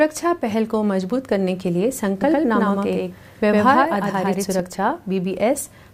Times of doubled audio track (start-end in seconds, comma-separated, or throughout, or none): 2.22-4.60